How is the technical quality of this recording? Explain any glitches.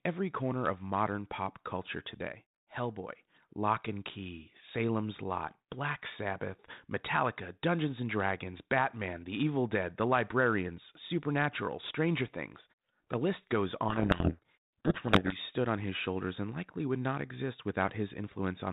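The recording has two clear glitches over a light, band-limited telephone texture that fits G.726 ADPCM at around 32 kbit/s.

From 1.92 to 3.41 s, after "corner of modern pop", a piercing 6 kHz tone swells over about 0.4 s to roughly 10 dB above the speech. This is loudspeaker feedback squeal, where the microphone re-amplifies its own loudspeaker output.

From 13.88 to 15.39 s, between "list goes" and "stood on his shoulders", harsh distortion buries the speech. This is a codec payload misread: the decoder reads G.726 code words with their bit order reversed.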